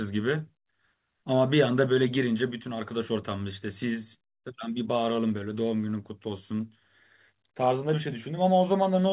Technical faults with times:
none

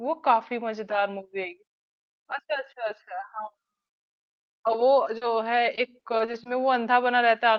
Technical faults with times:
5.17-5.23 short concealed packet loss
5.75-6.47 repeated packet loss (robotic sound)

